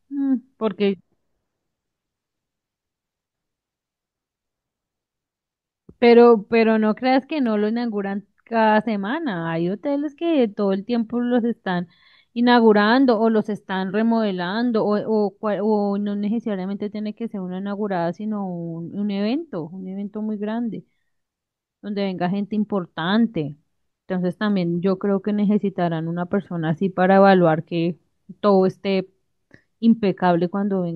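No technical faults can be heard anywhere in this speech recording.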